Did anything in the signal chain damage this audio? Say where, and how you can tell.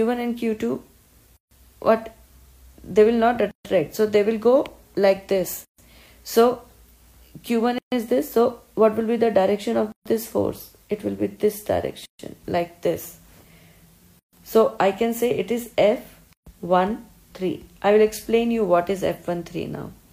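Yes: a gap at a join of encoded pieces, at 1.37, 3.51, 5.65, 7.78, 9.92, 12.06, 14.19 and 16.33 s, each 136 to 145 ms, most after about 2 s of sound. Each untrimmed encoder start delay and final-frame padding leaves a blank column on the spectrogram and a flat waveform with smeared edges before the sound resumes.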